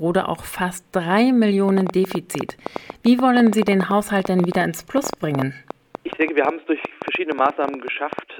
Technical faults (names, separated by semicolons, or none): train of clicks